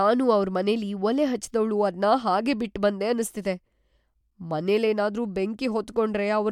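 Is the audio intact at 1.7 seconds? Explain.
Yes, the audio is intact at 1.7 seconds, with no dropout, click, distortion or other fault at that point.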